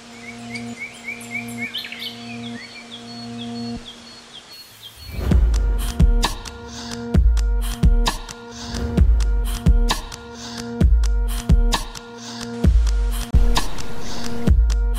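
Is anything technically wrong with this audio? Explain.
Yes, there is a likely Bluetooth dropout: a packet failed to reach the headphones in time, so from 13.31 to 13.34 s the sound cuts to silence for about 23 ms, which fits a single lost frame, then resumes as if it had kept playing.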